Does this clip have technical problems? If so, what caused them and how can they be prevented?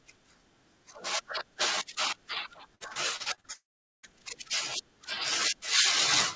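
Yes. From 2.75 to 3.47 s there's repeated packet loss with a robotic sound. Six short gaps, the longest about 52 ms, get patched by stretching the previous sound, so nearly a third of that stretch is filler and comes out choppy. A steadier network, or forward error correction plus a bit more jitter-buffer headroom, would prevent it.

Then from 3.53 to 4.06 s the audio cuts out for about half a second. The concealment buzz fades into roughly 0.42 s of silence before the sound picks up again with that chunk gone. It's likely a long network dropout. A more stable connection, like wired instead of flaky Wi-Fi, would prevent it.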